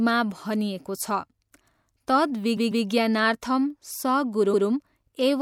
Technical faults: repeated frames

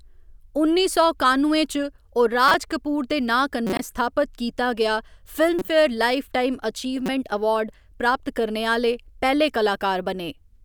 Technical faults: corrupt frame decoded

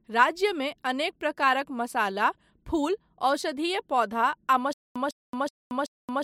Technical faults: stutter with silent gaps

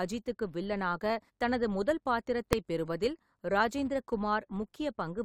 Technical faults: filter restarted on every block; invalid numbers at full scale

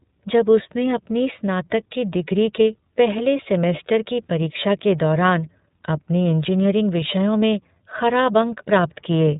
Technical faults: iLBC codec

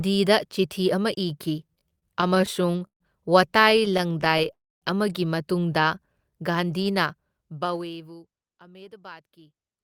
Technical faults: repeated stalls (stutter); call audio freeze; jitter buffer slow-down; jitter buffer speed-up

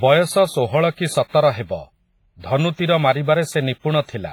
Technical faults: WMA compression; pre-echo

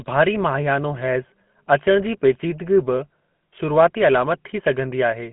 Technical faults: GSM full-rate codec

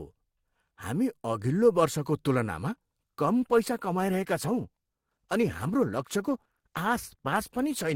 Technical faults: adaptive stream at a lower bitrate

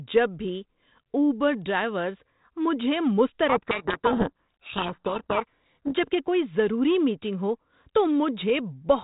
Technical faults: codec payload misread

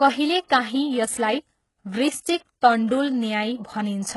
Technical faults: HE-AAC compression

